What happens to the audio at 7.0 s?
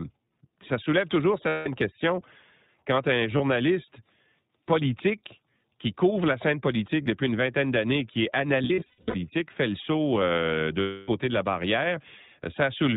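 Between 7.02 and 7.08 s, just after "couvre la scène politique" and before "une vingtaine d'années qui", the sound briefly turns into a held, slightly buzzy vowel-like tone. These are lost iLBC frames. The decoder filled the gap by repeating the last pitch cycle mixed with noise, which fits about 40 ms of missing audio, or two 20 ms frames. Normal speech returns almost immediately because each iLBC frame decodes on its own.

Around that moment the speech also sounds narrowband, a little rough and synthetic, with nothing above 4 kHz. That comes from the iLBC codec, whose damage is plainly audible here. It is a narrowband codec, which strips the high end, and it codes each frame's excitation independently at 15.2 kbps, which leaves the coarse, processed texture.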